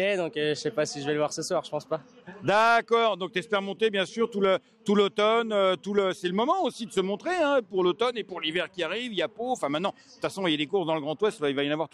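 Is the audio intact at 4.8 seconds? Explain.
Yes, the audio is intact at 4.8 seconds, with no dropout, click, distortion or other fault audible at that point.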